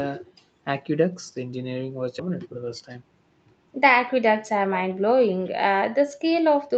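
At 2.19 to 2.21 s the speech lurches forward with no pause to mark it, as if roughly 0.4 s of talk never happened, and the two sides of the cut butt straight against each other. This is a skip ahead: a chunk of audio was discarded, likely when the jitter buffer overflowed with later packets already queued, so playback jumped to the newer material and the delay dropped by roughly the same amount.

Straight after, from 2.29 to 3.03 s, the speech sounds rushed, running at about 110% speed while the pitch stays put. This is jitter buffer speed-up. The buffer was still holding more audio than its target, so the receiver repeatedly snipped out tiny slices one or a few pitch periods long, shaving off about 70 ms in total to catch up. Throughout, the Opus call path and microphone processing leave nothing above 8 kHz.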